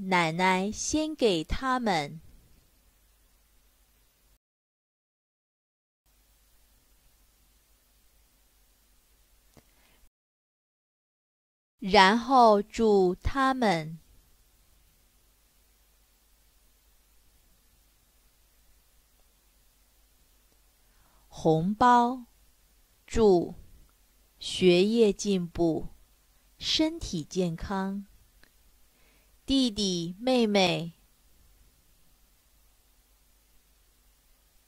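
At 4.37 s and again at 10.08 s the audio halts in a rebuffering stall, silent until 6.06 s and 11.79 s, about 1.7 s each, while the player waits for data. Unlike a dropout, it resumes exactly where it stopped, so nothing is skipped; time is only added.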